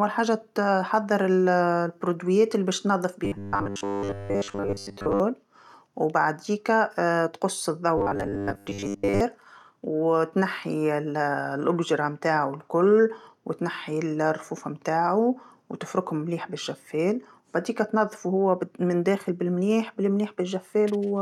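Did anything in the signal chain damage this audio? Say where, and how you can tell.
Yes. The damage likely happened at the driver or buffer stage: audio arrived too seldom, and the gaps were filled by replaying a short stretch of about 10 ms over and over. This robotic sound from repeated short buffers runs from 3.25 to 5.20 s, just after "المنتوجات اللي باش تنظف", and again from 7.98 to 9.21 s. Both times, a rigid 100 Hz buzz runs through the speech and most of the real audio is skipped.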